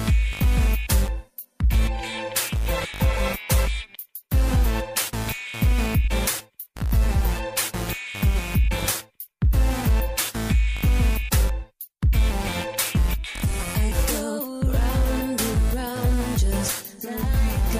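A block size mismatch (truncated) runs throughout. Block ends are discarded, leaving a 43.1 Hz buzz, which fits 1024-sample blocks. The speed stays unchanged.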